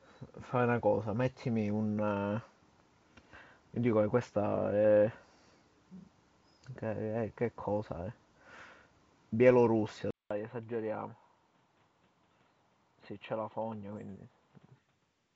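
At 10.1 s the sound cuts out for about 200 ms, and when it comes back it's a different animal. Nothing gets through above roughly 4.2 kHz, the level sits about 5 dB lower, and there's a new noise floor roughly 40 dB under the signal. That dull, boxy change through to the end is most likely the input switched to a poorer device, such as a fallback mic or a headset's narrowband call profile. Before the switch, the wideband G.722 coding carries the top end up to 7 kHz with no real damage you can hear.

Then from 13.94 to 14.00 s there's a short rough burst of pops with the level jumping around. Those are bit errors on an ADPCM link, at a low rate somewhere around 0.2 percent, spread across a handful of frames. The reason it sounds like a smear and not a single click is that ADPCM decodes each sample from its prediction and step size. A flipped bit throws both of those off, so the decoder keeps producing wrong output for a few milliseconds until it settles again.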